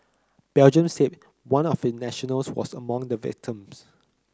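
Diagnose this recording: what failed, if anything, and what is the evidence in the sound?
Nothing failed in this speech recording at any stage of the chain. No event in the sound calls for a diagnosis.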